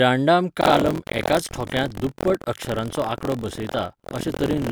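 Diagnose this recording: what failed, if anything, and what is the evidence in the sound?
The failure is in the driver or buffer stage: buffer tearing. From 0.60 s to the end, the speech carries a steady robotic buzz at 43.1 Hz. It follows the signal, not the silence. That rate fits a 1024-sample buffer. The writer and the hardware reader have slipped and cross inside each period. Each period plays almost entirely audio about 70 ms old, from a lap earlier. Hard joins at each crossing make the rattle.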